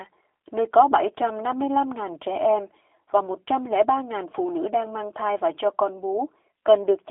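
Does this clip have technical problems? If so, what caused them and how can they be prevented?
Yes. G.729 codec damage runs throughout: the speech is rebuilt from a vocal tract model, pitch predictor and a few pulses, so it sounds rough and synthetic, sitting in a 300 Hz to 3.5 kHz band with nothing above 3.7 kHz, which fits an 8 kbit/s VoIP link. Record locally or use a wideband codec such as Opus instead.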